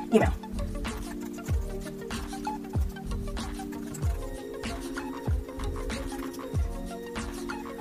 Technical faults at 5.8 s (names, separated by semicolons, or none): block size mismatch (truncated)